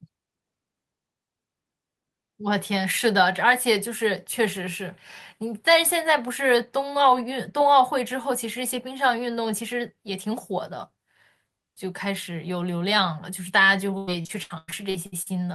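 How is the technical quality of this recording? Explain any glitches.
The recording has one clear glitch, near the end. From 13.97 s to 15.28 s there is repeated packet loss (robotic sound): packets kept going missing, nine gaps in quick succession, the longest 100 ms. Each hole was bridged by stretching the preceding sound, so about 37% of that stretch is synthetic fill, heard as choppy, robotic speech with pieces dropped. The call path itself sounds like Opus capped near 12 kHz.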